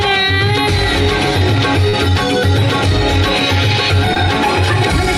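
At 1.89 to 1.95 s and again at 4.14 to 4.17 s, short concealed packet loss occurs. About 40 ms, then 20 ms, of audio arrived too late. The decoder extended the preceding sound to cover each gap, then blended back. Each is heard as a brief smear or wobble.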